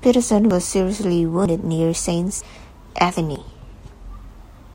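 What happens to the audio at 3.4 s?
Audio missing between chunks at 3.36 s: about 50 ms of speech skips as the sides butt together, likely lost at a 1-second chunk boundary.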